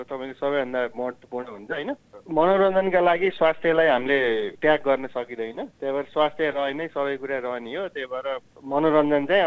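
Nothing technically wrong here: the audio carries the ordinary coding character of a wideband call path, with the band stopping at 8 kHz in a way that points to G.722, and nothing to flag.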